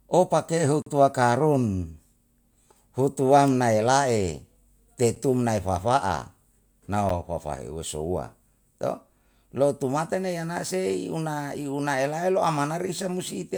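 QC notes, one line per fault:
0.82–0.86 s, block of digital silence: right after "o pake" the speech drops out to silence for about 43 ms, which fits a 2048-sample buffer left unfilled. The abrupt cut leaves an audible hole. On the waveform it shows as a flat line, and on the spectrogram as a blank gap with broadband streaks at each edge.
5.15 s and 7.09 s, block of digital silence: two 11 ms zero runs, which fit a 512-sample buffer. The first falls between "elae te" and "tun nai huwa". Each is too short to read as a gap, so it is heard as a tick. Each shows as a thin vertical stripe on the spectrogram and a brief flatline on the waveform.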